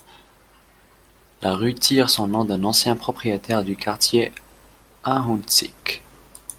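Listening through this speech recording, nothing stood out as a technical problem.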